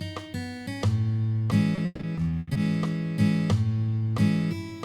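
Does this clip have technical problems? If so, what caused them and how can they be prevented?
Yes. From 1.75 to 2.57 s the stream suffers repeated packet loss (robotic sound): six times, packets arrived late or not at all, and the receiver bridged each hole by extending the last piece of audio it had. About 300 ms went missing in total, the longest hole 140 ms, so roughly 37% of that stretch is patched-over sound. The result is a choppy texture with fragments dropped out. A more stable network path, a larger jitter buffer and forward error correction would prevent it.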